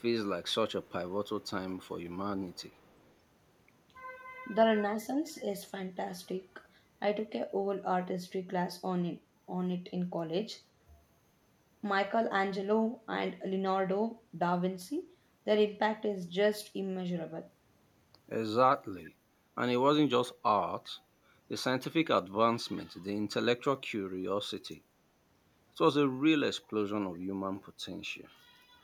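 A faint echo leak appears at 0.83 to 0.91 s, 1.40 to 1.49 s and 2.52 to 3.12 s. A delayed copy of the speech returns about 391 ms late, very quiet. The likely cause is a loudspeaker echo canceller letting residue through.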